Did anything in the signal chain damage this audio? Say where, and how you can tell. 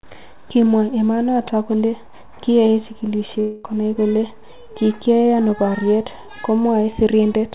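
Yes, at the network stage. From 3.40 to 3.66 s the sound turns into a fading buzz lasting about 0.24 s, then resumes at "konai kole" with that stretch missing. A spectrogram shows smeared, repeating bands below the call codec's 4 kHz ceiling. This is likely a long network dropout, with concealment stretching the last sound over the lost packets.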